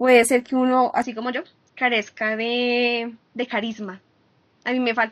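Input switched to a poorer device, likely, at 1.02 s: the speech turns dull with nothing above 6.5 kHz, drops about 5 dB, and gains faint noise.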